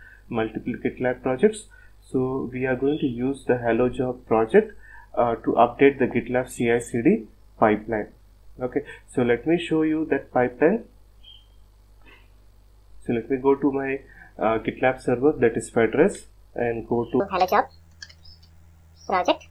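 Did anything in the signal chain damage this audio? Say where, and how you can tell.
Yes: a section at the wrong speed runs from 17.2 s to the end, 1.63 times fast and about ten semitones sharp, likely from a playback or editing clock mismatch.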